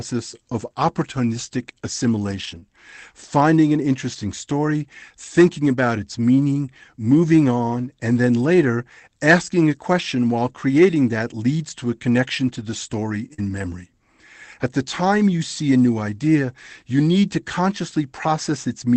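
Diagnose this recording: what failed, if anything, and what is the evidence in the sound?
The failure is at the network stage: packets were lost in transit and repaired by the receiver's Opus decoder. From about 2.31 to 2.57 s, just before "finding an interesting story", and again from 13.38 to 13.6 s, there is lost packet rebuilt from error correction. The sound carries on without a gap but turns rougher and noisier for 140 ms and 120 ms, respectively. That fits a run of 20 ms packets replaced by the low-bitrate copies carried in the following packets. This is what separates it from concealment: real but degraded audio plays through, rather than an extrapolated guess.

Short concealed packet loss sits right beside each of those stretches. At 2.59 to 2.64 s, about 20 ms never arrived. At 13.34 to 13.40 s, just after "connection to the story", about 40 ms never arrived. Without a backup copy, the decoder continued the preceding sound from its pitch or as shaped noise, over 24 ms and 42 ms respectively, and then crossfaded back. 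The result is a brief smear or wobble rather than the sustained coarse texture of error-corrected frames. The call itself ran through Opus at 24 kbps, with audio reaching up to 8 kHz.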